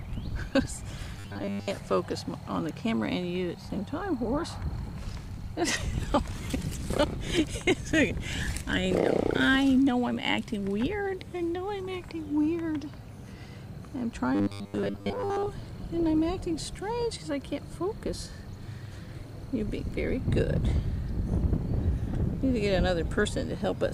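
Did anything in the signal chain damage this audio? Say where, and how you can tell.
Yes. There is robotic sound from repeated short buffers from 1.20 to 1.71 s and from 14.35 to 15.47 s. In both spans the sound becomes a rigid, metallic buzz fixed at 100 Hz, which means a segment of about 10 ms is looping. Most of the real audio in those spans is skipped and replaced by repeats. The likely stage is the driver or buffer, with audio arriving too seldom and the software refilling the gap with its last block.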